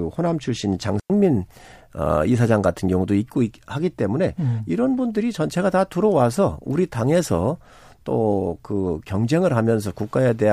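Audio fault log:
0.997 to 1.099 s, digital wireless dropout: the speech cuts to a clean hole of near silence lasting about 102 ms, with no noise burst on either side. The receiver lost too much data from the digital link and muted with a very short fade rather than passing corrupted audio.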